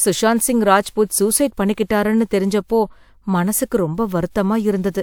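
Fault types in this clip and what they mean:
corrupt frame decoded: a single compressed frame reached the decoder with flipped bits, and instead of discarding or concealing it, the decoder played it as if it were valid. Misread codes and wrong gains put energy at the wrong frequencies for the span of that one frame, from 0.40 to 0.45 s, heard as a brief chirp, squeak, blip or burst of noise peaking at about -15 dBFS, just before "சிங் ராஜ்புத் சூஸைட் பண்ணிக்கிட்டாருன்னு".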